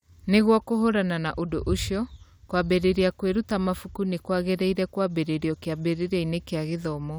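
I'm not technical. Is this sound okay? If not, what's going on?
Yes, it's fine; nothing wrong to hear here.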